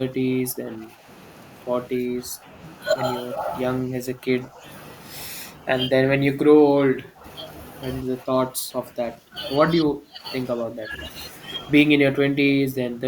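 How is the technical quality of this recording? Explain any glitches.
The speech is repeatedly pushed down in level, in what sounds like speech suppressed in double talk, at 0.0–1.06, 1.95–2.5, 3.81–4.64, 5.52–7.25, 8.21–9.35, 9.75–10.23, 10.55–10.92 and 11.99 s to the end. The voice sinks by about 10 to 20 dB, and by about 25 dB in the deepest dip near 5.5–7.3 s. This is likely an echo canceller turning the talker down while the far side was also speaking.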